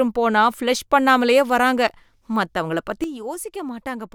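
A sudden gain jump arrives at 3.04 s and lasts to the end of the speech. The level falls by about 9 dB in a single step with no fade, and the background noise drops along with the voice at that instant. A change this abrupt is likely a digital gain setting or bit shift applied from one sample to the next without any ramp.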